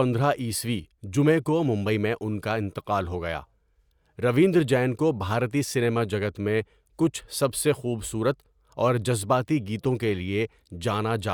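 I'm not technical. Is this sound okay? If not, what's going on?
Yes, it sounds fine; nothing here needs fixing.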